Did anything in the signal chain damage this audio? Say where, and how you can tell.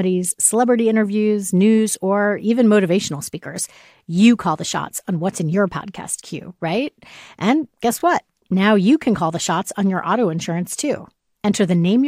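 Yes. Overlapping chunks at 3.98–4.00 s, between "or even motivational speakers" and "you call the shots", and again at 8.00–8.03 s. At the buffer stage, 4.0 s blocks each started 23 ms early, so that slice repeats as a stutter at every join.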